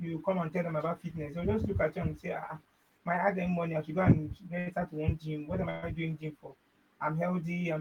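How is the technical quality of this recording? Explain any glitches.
Two brief interruptions break the flow of the speech, each a held or smeared sound before the talker resumes.

From 4.59 to 4.68 s, just before "to one gym", a sound hangs on unnaturally for about 68 ms with a faint buzz or dip. This is a short stall from a late packet: the jitter buffer ran dry, so the receiver stretched the last sound until the packet arrived.

From 5.70 to 5.84 s, right before "doing gym for", the audio stops advancing and the last sound continues as a fading buzz or hiss for about 121 ms, never dropping to silence. This is a call audio freeze, likely caused by delayed packets emptying the jitter buffer, which inserts a gap.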